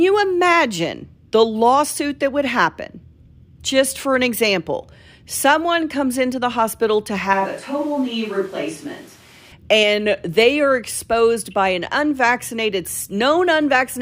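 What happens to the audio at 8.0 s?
From 7.33 to 9.52 s, after "into the hospital to", there is a switch to a distant microphone, likely a farther pickup replacing a dropped close signal. The speech turns abruptly hollow, roomy and bass-thin at roughly the same level, with room noise about 25 dB down, until "and they are exposed".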